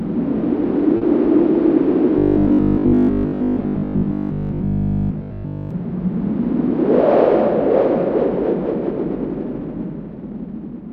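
At 0.97 to 1.03 s there is short concealed packet loss. About 40 ms of audio arrived too late, and the receiver filled the gap by extending the preceding sound and blending back in. It is heard as a brief smear or wobble. On a spectrogram it shows as a short, blurred, over-smooth patch.

From 2.19 to 5.71 s the sound turns into a rigid, metallic 50 Hz buzz, which is robotic sound from repeated short buffers. The likely cause is audio arriving too seldom, so a 20 ms chunk was looped while most of the real material was skipped. The waveform shows repeating 20 ms cycles, and the spectrogram shows evenly spaced harmonic lines 50 Hz apart.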